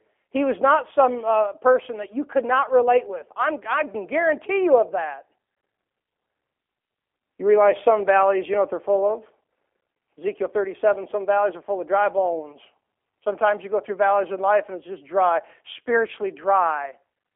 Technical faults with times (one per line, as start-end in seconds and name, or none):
0.00-17.36 G.729 codec